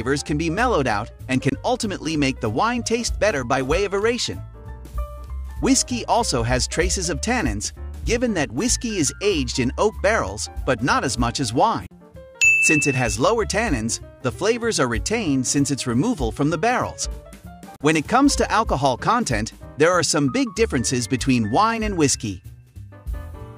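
The audio drops out briefly three times: a short gap at 1.49 s, then longer ones at 11.86 s and 17.76 s, each about 50 ms. These are most likely Bluetooth dropouts, where wireless packets arrive too late and are discarded. What sets them apart from a stall or buffer underrun is that the sound picks up further along rather than where it stopped. About 20 ms is lost at the first gap, fitting a single packet, and about 40 ms at each later one, fitting two.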